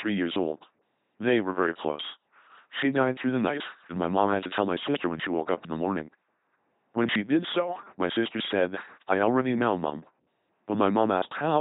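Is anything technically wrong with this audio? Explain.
Yes. The speech has been through an LPC-10 vocoder for its whole length, with heavy damage. Each short frame is rebuilt by a vocal-tract filter of up to ten poles excited either by a pulse train or by noise, never a mix, which fits a 2.4 kbit/s coder. The result is a buzzing, mechanical robot voice, with stray buzz or hiss wherever the voiced or unvoiced decision goes wrong. Nothing remains above 3.8 kHz.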